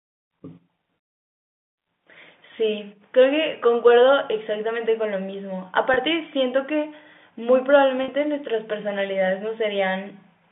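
At 5.94 to 5.96 s and 8.04 to 8.08 s, packet loss with pitch repetition occurs. About 20 ms, then 40 ms, went missing, which fits one and two lost packets. The receiver repeated the last pitch period. Each gap sounds like a brief, buzzy held tone.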